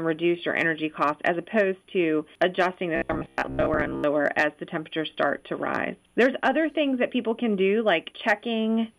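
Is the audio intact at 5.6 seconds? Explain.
Yes, at 5.6 seconds the audio runs on cleanly, with no dropout, click, distortion or other fault.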